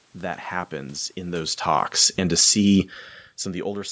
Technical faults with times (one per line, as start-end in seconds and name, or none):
1.21-3.74 automatic gain falling
2.39-2.90 automatic gain rising